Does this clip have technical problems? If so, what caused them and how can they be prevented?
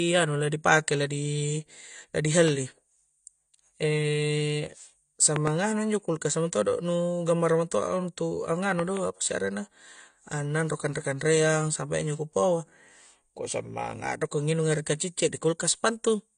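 Yes. The speech sounds dull and smeared, with nothing above 9.9 kHz, which fits likely low-bitrate AAC compression near 32 kbps. Export at a higher bitrate.

Loud pops, about 15 dB above the speech, hit at 2.48–2.50 s, then in pairs at 5.36–5.49 s and 8.79–8.99 s, likely from connector or switch glitches. Secure the cables and don't switch anything mid-take.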